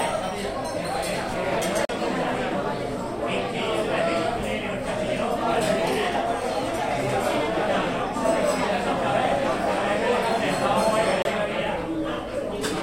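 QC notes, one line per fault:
1.85–1.89 s and 11.22–11.25 s, Bluetooth stall: the likely cause is radio interference holding up packets, so the headphone buffer ran empty and playback paused until resent packets arrived. The sound cuts to silence for 40 ms, then 28 ms, and then carries on.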